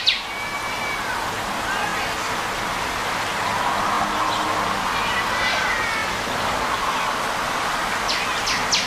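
You'll hear a small stutter at 0.88, 1.90, 2.93, 3.95, 4.97, 6.00, 7.02 and 8.04 s: overlapping chunks, with 1.0 s blocks each replaying the previous one's last 23 ms.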